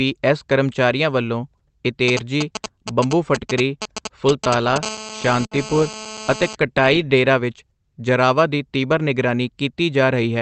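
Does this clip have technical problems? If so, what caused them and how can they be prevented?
Yes, there are four kinds of fault here.

Short concealed packet loss happens at 1.57 to 1.61 s, just after "ਐੱਸ ਕਰਮਚਾਰੀਆਂ ਵੱਲੋਂ", and again at 3.83 to 3.87 s. About 20 ms of audio arrived too late each time, so the receiver stretched the preceding sound to cover the gap and you get a quick smear. A steadier network path or a deeper jitter buffer prevents this.

GSM signalling bursts run from 2.08 to 4.78 s. A nearby 2G phone was exchanging short radio bursts with the network before going into a call, and the audio circuitry rectified them into a galloping pattern of ticks and 217 Hz buzz fragments. They're fairly loud, close to the level of the speech. Keeping phones well away from the mic, cables and interface prevents this.

GSM phone buzz runs from 4.83 to 6.55 s. It's a nearby 2G phone, now on a call and transmitting continuously at 217 bursts per second, which produces a hard, raspy buzz full of harmonics at about 12 dB below the speech. 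Keeping the phone away from the gear or switching it to airplane mode prevents this.

A burst of packet loss hits at 5.45 to 5.53 s. About 60 ms went missing in a row, so the concealment held and faded the last sound before the audio picked up again further on, with that stretch gone. Improving the network link, for example by using wired instead of Wi-Fi or reducing competing traffic, prevents this.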